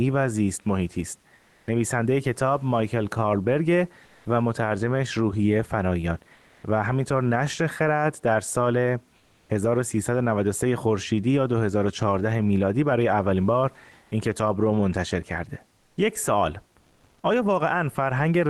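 Speech clip in which the pauses at 1.35–1.67, 4.05–4.25, 6.35–6.63, 9.17–9.49, 14.03–14.11 and 16.79–17.23 s carry comfort noise in place of the background: flat, featureless hiss, mostly slightly quieter (about 4 dB down at most, about 2 dB up at 14.03 s), likely from Opus discontinuous transmission.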